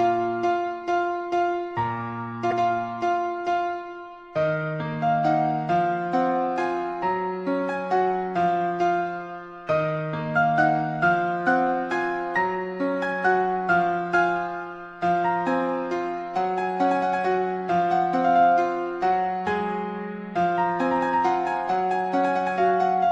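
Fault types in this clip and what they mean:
Broken MP3 bit reservoir: from 2.50 to 2.53 s the audio briefly breaks up and jumps ahead, a span of about 32 ms in a stream of 26.1 ms frames. This is likely a frame cut out of the stream, so the following frame read its borrowed reservoir bytes from the wrong data.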